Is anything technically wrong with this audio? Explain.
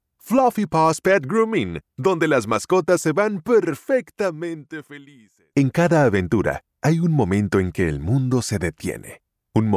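No, nothing in the signal points to a technical fault; it holds steady throughout with no audible disruption to its level, timing or continuity.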